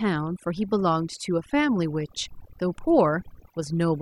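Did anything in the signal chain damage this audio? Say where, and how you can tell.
Yes. Overdone noise removal damaged it, at the processing stage where noise suppression runs, across the whole speech clip. Between phrases the background drops and breaks up into twinkling, warbling specks. The suppressor is pushing individual frequency bands far down whenever they sit close to its noise estimate, so quieter speech detail is removed along with the background noise. A low-bitrate codec can also warble, but its damage follows the signal's complexity, not whether a band sits near the noise floor.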